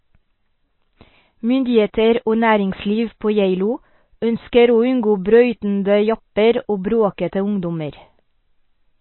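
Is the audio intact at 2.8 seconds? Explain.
No. At 2.8 seconds, as throughout the clip, the speech sounds watery and dull, with nothing above 4.1 kHz. This is likely MP3 compression, which the plainly audible damage suggests was at a very low bitrate, around 24 kbps.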